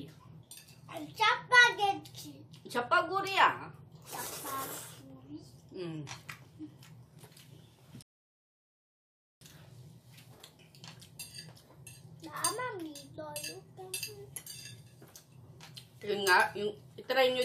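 The audio has a rebuffering stall from 8.02 to 9.41 s: playback halts into silence for 1.39 s, then continues exactly where it stopped. That seamless pickup is what sets it apart from a dropout. Nothing is skipped; the player simply ran dry and waited, adding time.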